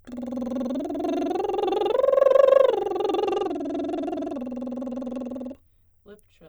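From 3.23 to 5.54 s the music shows a Bluetooth SBC bit pool drop. The link likely congested, so fewer bits reached the upper sub-bands. The treble goes dull and gritty noise appears. The loss fits a bit pool falling from 31 to 13.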